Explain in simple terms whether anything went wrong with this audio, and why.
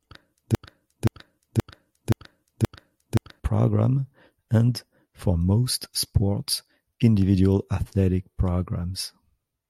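From 0.55 to 3.40 s the speech stutters: the same half-second snippet, about 0.52 s long, plays five times in a row. This is a broken-record loop. Most likely the player or stream stalled and kept repeating its last piece, so the speech meant for that stretch is lost.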